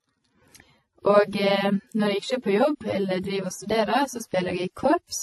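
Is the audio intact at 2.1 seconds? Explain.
No. At 2.1 seconds, as across the whole clip, the speech shows what is likely transcoding between lossy codecs. Nothing sounds above 12.1 kHz, and two different kinds of codec damage overlap: a smeared, swirly texture that fits a low-rate AAC encode, plus a second layer of its own grit that fits a later WMA pass. A single low-bitrate encode would give only one consistent artefact character, not two mixed together.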